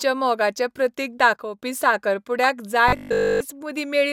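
This is a speech clip with three separate problems. Right after "मोगाचें प्रतीक", from 1.34 to 1.59 s, the level suddenly drops by about 6 dB, which is likely one channel dropping out before the mono sum. At 2.44 to 2.50 s there's a short burst of DAB burbling, hitting 8 frames because bit errors slipped past the error correction. From 2.88 to 3.40 s the speech becomes a rigid, metallic robotic buzz fixed at 50 Hz. The likely cause is repeated short buffers, with the same 20 ms of audio looping in place of nearly all the real signal.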